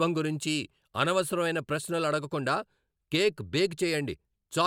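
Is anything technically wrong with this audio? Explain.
No, no technical faults here.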